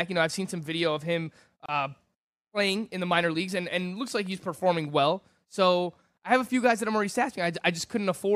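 At 1.66 s, right after "some video of him", the speech drops out for about 28 ms and resumes at 1.69 s. This is a gap at a join of encoded pieces: two separately encoded segments were spliced without trimming, so the encoder's start-up delay and the padding of the final frame both remained. The result is a short hole of silence with abrupt, slightly smeared edges, after which the speech continues from where it stopped.

From 4.08 s to 5.04 s, just after "minor leagues and and", a train of clicks runs over the speech. About seven sharp, similar pulses arrive at a regular spacing of roughly 5.2 per second, peaking at about the level of the speech itself, heard as ticking over the speech. The cause is likely electrical interference from nearby equipment or a faulty connection or power supply, injecting the same pulse repeatedly.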